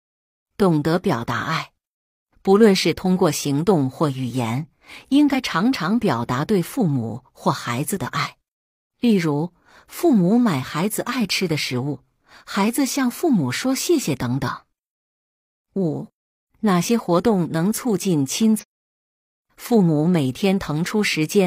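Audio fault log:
5.30–5.35 s and 18.58–18.64 s: damaged data in a compressed stream. Corrupt frames confuse the decoder, giving brief glitches that appear as abrupt waveform discontinuities.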